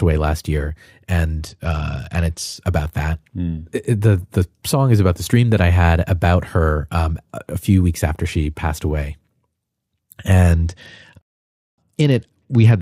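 From 1.37 to 2.56 s, just before "about that", the speech turns dull and loses its treble while a gritty noise rises, and it happens again from 10.53 s to the end of the clip. Both are Bluetooth SBC bit pool drops. A congested link forced the encoder to cut its bit allowance, which fits a fall from a bit pool of 28 to 10, around 84 kbps. The highest sub-bands were starved and the rest coarsely quantised.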